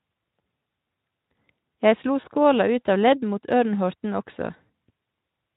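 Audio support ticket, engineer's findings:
VoIP packet loss concealed by the speech codec, 2.21–2.27 s: speech briefly smeared into a buzzy, fading sustain, fits one lost 20 ms frame. Decoder extrapolating last pitch and filter with falling gain.

Same, 4.66–4.68 s: shorter hold-and-fade, fits two lost frames. Not a hard dropout or click; the sound is stretched rather than silenced, and Speex decoding carries the weakened state past the loss.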